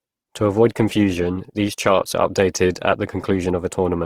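Throughout, the speech sounds grainy and rough, with noisy highs. This is likely Opus compression in music mode, fitting a low rate near 16 kbps.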